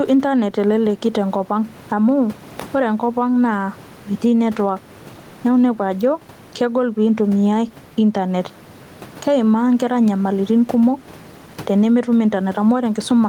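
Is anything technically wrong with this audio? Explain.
Yes. Gain pumping runs through the whole speech clip: the gain swings by around 10 dB, with the room noise about 31 dB below the speech. This is likely from gain set far too high with a fast limiter pulling it down. Unlike a noise gate, which drops the gaps toward silence, this pulls levels together, and loud and soft passages sound squashed together.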